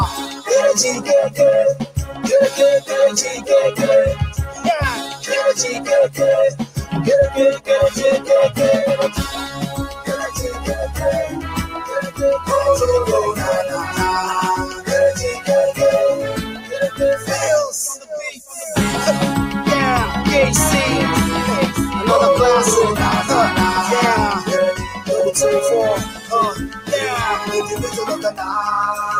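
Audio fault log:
Throughout: noise suppressor applied to music or sounds. A speech-oriented suppressor treats sustained tones, ambience and decays as noise, so level swings by about 10 dB as attacks pass and held material sinks, giving audible pumping and a thinned, fluttering texture.
0.12–3.50 s, 4.46–12.22 s, 13.38–18.56 s, 24.88–28.44 s: sound cut by the noise suppressor. Steady and fading portions are pulled down harder than transients, by up to about 12, 14, 13 and 14 dB respectively. Tails truncate and sustains dip in short stretches, while sharp onsets survive largely intact.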